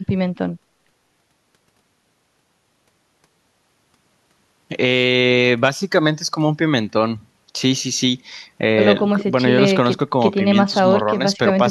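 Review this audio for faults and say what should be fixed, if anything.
Nothing here needs fixing, as the signal shows no technical fault at any point in the recording.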